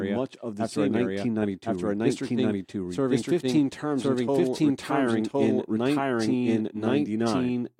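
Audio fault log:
throughout: doubled audio track; the speech recurs about one second late at roughly equal level, dry and full-band, likely from a second, slower capture path.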